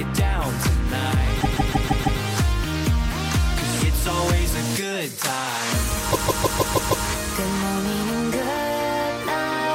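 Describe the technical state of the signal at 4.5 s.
At 4.5 s the signal is intact, with no dropout, clipping, distortion or other technical fault audible at that point.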